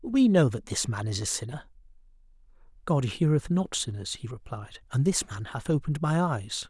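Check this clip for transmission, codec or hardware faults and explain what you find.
No transmission, codec or hardware faults are audible anywhere in the speech.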